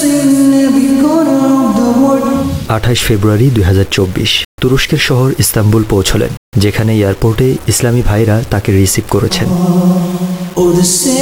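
Throughout, grainy distortion tracks the sound, likely low bit depth without dither fitting 5-bit rounding. Unlike steady dither hiss, this grit moves with the signal.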